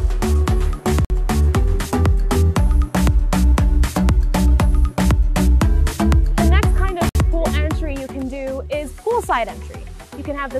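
The sound cuts out abruptly twice, with hard-edged silent holes from 1.05 to 1.10 s (about 54 ms) and from 7.09 to 7.15 s (about 60 ms), spaced roughly 6 s apart. This is a gap between stream segments: the time stamps of consecutive 6-second segments leave a small gap, and the player fills it with silence. Nothing is missing from the audio itself; the silence is inserted, which pushes the later material slightly later.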